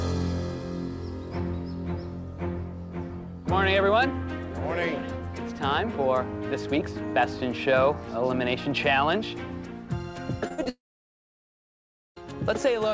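Audio carried over a call link, band-limited to nothing above 8 kHz in a way that fits the G.722 codec at 64 kbps, breaks up late in the clip. At 10.48 to 10.52 s, 10.54 to 10.60 s and 10.64 to 10.67 s there are three quick smears or wobbles, each a few hundredths of a second long. This is short concealed packet loss: 20 ms, 40 ms and 20 ms of the stream arrived too late, and the receiver papered over each gap by extending the preceding sound before blending back into the real signal. Straight after, from 10.69 s to 12.18 s, the sound briefly carries on as a fading buzz and then drops to near silence for about 1.4 s before resuming, with roughly 1.5 s of material simply gone. That is a long network dropout, likely caused by the connection delivering no packets at all for that stretch, leaving concealment to fade out once it had nothing left to extend.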